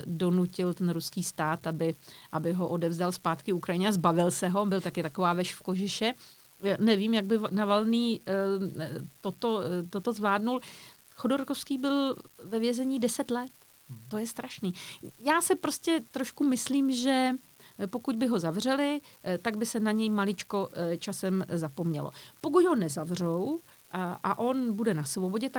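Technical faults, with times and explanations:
Throughout, unreliable data bit: a steady crackle or fizz runs under the speech and into the pauses, from one marginal data line flipping its bit in random samples.
Throughout, clock drift between sender and receiver: small, unevenly spaced timing hiccups, because the sender's clock runs roughly 1% slow and the receiver's buffer keeps draining.
0.10 to 24.77 s, repeated timing corrections: slight stumbles and an unsteady tempo as the receiver keeps repeating short pieces, stretching playback to 99% speed and adding roughly 0.3 s.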